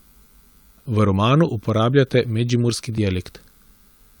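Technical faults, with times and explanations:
2.98 s, dropped buffer (overrun): the speech jumps ahead a few milliseconds. Likely unread samples were overwritten, splicing the two sides together.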